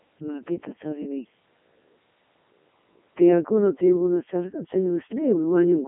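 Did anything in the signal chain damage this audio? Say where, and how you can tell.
Yes, at the codec stage, throughout: a Codec 2 vocoder re-synthesises the speech from sine waves, giving a buzzy, robotic tone consistent with its top 3.2 kbit/s mode. A spectrogram shows a 250 Hz to 3.4 kHz band and a hard ceiling near 3.8 kHz, and the waveform no longer resembles real speech.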